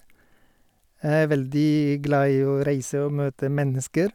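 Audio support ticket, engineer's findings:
No faults found in the speech clip on listening. Nothing audible to attribute to any component in the chain.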